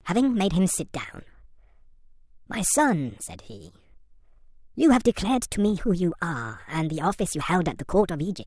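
Speech runs high and hurried from start to finish, about 1.38 times too fast and roughly 5.5 semitones sharp. This is a wrong sample rate fault: the audio is played back faster than it was captured, with no conversion, which fits 16 kHz material played at 22 kHz.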